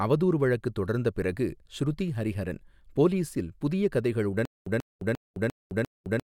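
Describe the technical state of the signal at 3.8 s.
At 3.8 s the speech signal is intact, with no dropout, distortion, or other technical fault audible at that point.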